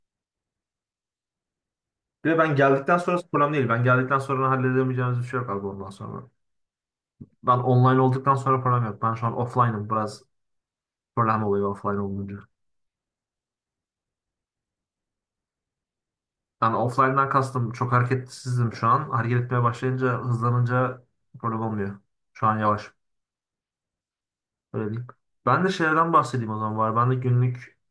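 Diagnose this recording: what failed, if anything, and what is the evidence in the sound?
Nothing in the recording points to a failure at any stage of the chain, so there's simply nothing here to diagnose.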